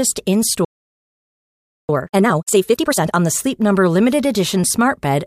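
At 0.65 s the speech cuts out and stays silent until 1.89 s, about 1.24 seconds. This playback stall was likely caused by the player running short of buffered data or its output thread being held up, so nothing reached the output. The speech stops abruptly mid-flow, and the gap is long enough to register as a dropout, not a brief hiccup.

From 1.89 s to 3.13 s the player works off the backlog built up during the stall with time-compressed catch-up. It discards small slices of audio and cross-fades the remaining pieces together, so the speech runs at twice normal speed while the pitch stays unchanged. The result is hurried speech. Normal pacing returns at 3.13 s, just before "on the".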